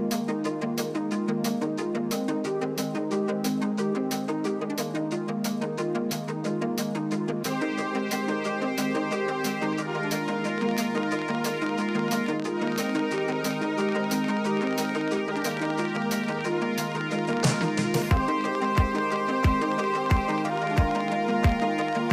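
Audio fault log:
10.28–21.94 s: train of clicks, 10.3 similar pops per second at an uneven pace, well above the sound, likely interference from nearby equipment.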